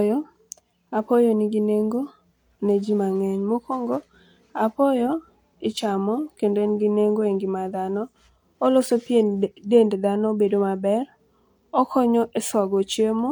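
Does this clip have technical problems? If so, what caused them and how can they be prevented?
No, nothing in this speech recording points to a technical fault, so there is no cause to trace and nothing to prevent.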